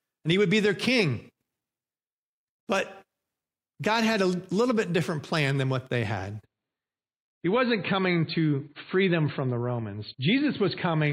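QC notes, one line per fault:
6.44 to 11.13 s, adaptive stream at a lower bitrate: from 6.44 s to the end the speech abruptly goes dull and smeared, with nothing above 4.5 kHz and more codec artefacts, yet there is no gap or dropout at the switch. The player has moved to a much leaner version of the same stream, and the jump points to a drop from about 128 kbit/s MP3 to about 24 kbit/s MP3.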